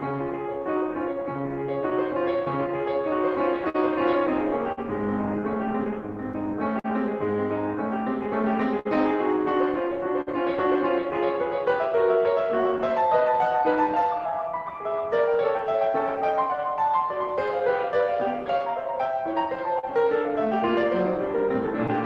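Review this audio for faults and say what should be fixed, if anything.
Clock drift between sender and receiver runs through the whole piece of music. The sending clock is about 4 percent slower than the receiver's, so the jitter buffer keeps draining. This steady one-directional pull is what separates it from random network jitter, which wanders both ways. Fix it by resampling adaptively against the sender's measured clock rate.

Repeated timing corrections run from 0.12 s to 20.8 s. The receiver keeps repeating short pieces to stay in step, stretching the music to 98 percent speed and adding roughly 400 ms overall. This is heard as a faintly unsteady, dragging tempo rather than distinct dropouts, which sets it apart from packet loss. Smooth corrections with pitch-preserving time-stretching instead of repeated chunks.

Scattered short gaps fall between 1.90 s and 10.29 s, around ten of them with the longest near 50 ms. 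A second run between 12.78 s and 21.90 s has around twenty, the longest near 40 ms. Each hole was filled by extending the preceding sound, leaving brief ticks or smears. Unlike the timing corrections, these are isolated local blemishes rather than a tempo drift. Forward error correction or a slightly deeper jitter buffer would prevent them.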